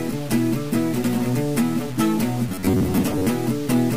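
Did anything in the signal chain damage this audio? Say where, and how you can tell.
Yes. Throughout the clip the audio has a coarse, grainy distortion that rises and falls with the sound itself, sitting roughly 20 dB below the signal, with quiet passages turning gritty rather than hissy. That error tracks the waveform instead of forming a steady noise floor, which points to a sample-format conversion stage. The likely cause is low bit depth without dither: samples truncated to something like 5 bits, so each value snaps to a few steps.

From 2.49 to 3.27 s the sound takes on a rigid, metallic buzz at about 93.8 Hz while still loosely following the underlying audio. This is robotic sound from repeated short buffers, at the driver or buffer stage. The likely cause is that fresh audio arrived too slowly and the playback side refilled the gap by repeating a segment roughly 10.7 ms long. Around half the audio in that stretch is repeated material, and the repeat period imposes the fixed buzz pitch.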